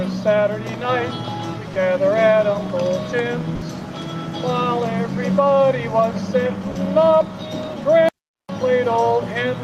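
At 3.55 s the sound drops out for 60 ms, and at 6.71 s for 40 ms, briefly replaced by steady noise or near silence. That's likely sound dropped by the voice detector: the sender's discontinuous transmission mistook real material for background and stopped sending.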